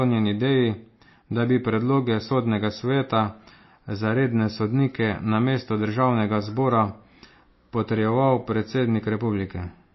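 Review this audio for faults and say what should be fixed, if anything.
Compression damage runs through the whole speech clip. Nothing survives above 5.8 kHz, and the sound turns watery, which points to likely MP3 compression at a bitrate near 24 kbps. Encode at a higher bitrate or use a lossless format.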